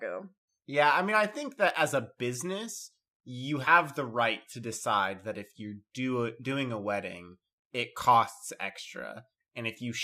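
A speech clip with one fault. At 3.64 to 3.68 s there is a brief glitch, caused by damaged data in the compressed stream. The decoder could not read those corrupted bytes correctly, lost sync, and produced a short glitch before recovering.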